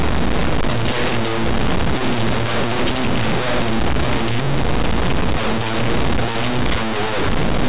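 From the first moment to the end, the whole speech clip is hit by linear audio read as companded. The samples were written as plain linear 8-bit values but decoded as if they were mu-law codes, so small values sitting just to one side of zero get blown up to the loudest outputs while their neighbours stay tiny. The result is a harsh, buzzy, very loud distortion smeared over everything.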